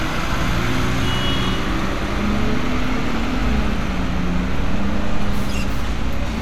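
Everyday sounds with a block size mismatch (truncated) from 2.24 s onward: a 100 Hz buzz from discarded block ends. Unlike steady mains hum, it starts abruptly, and playback speed stays unchanged.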